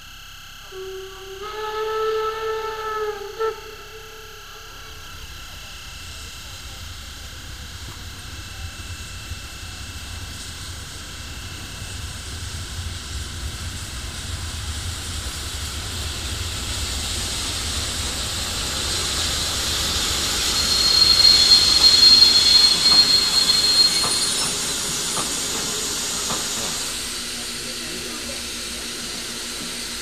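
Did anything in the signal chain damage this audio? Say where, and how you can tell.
No, no signal-chain damage audible.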